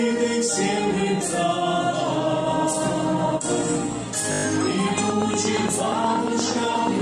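From 4.32 to 4.44 s there is a system hang loop. The driver stalled while the hardware kept replaying one 20 ms slice, six times over. That loop repeats 50 times a second, so it comes across as a brief, steady buzz. Little or no audio seems lost.

At 4.98 s a train of clicks begins and runs to the end at 7.02 s. Sharp ticks arrive evenly, about 8.4 per second, peaking roughly 10 dB above the sound. They likely come from electrical interference or a struggling interface.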